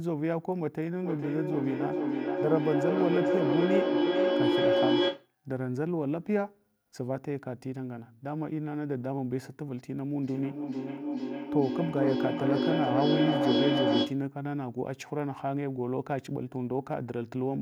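A speech clip with two acoustic loops between devices sharing a room. From 1.03 to 5.34 s, a feedback echo between two devices: one device plays back the other's microphone, which recaptures it beyond its echo canceller's reach, so speech returns roughly every 400 ms, thinning and ringing, peaking about 5 dB above the speech. From 10.22 to 14.28 s the loop gains level each trip, producing feedback howl: repeats narrow to a tone near 300 Hz, with a loop delay of around 400 ms, reaching about 3 dB over the speech.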